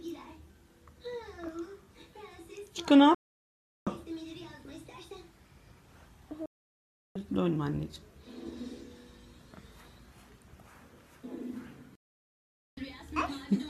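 Three digital broadcast dropouts occur, at 3.15 to 3.87 s, 6.46 to 7.16 s and 11.95 to 12.78 s, each lasting roughly 0.7 to 0.8 s. The receiver stopped getting decodable frames and muted until valid ones arrived, so the sound drops to clean silence. Unlike packet-loss concealment, there is no stutter, repeat or smeared fill. Playback resumes later in the programme, and whatever was broadcast during each gap is simply gone.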